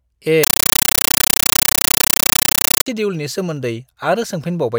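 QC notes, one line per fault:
0.44 to 2.86 s, compressed stream played as audio. Loud chattering static replaces the speech. Bursts of noise about 9.3 ms long repeat 31.25 times a second, with silence between them. Undecoded Dolby Digital frames are played as samples, which fits a 448 kbps AC-3 stream.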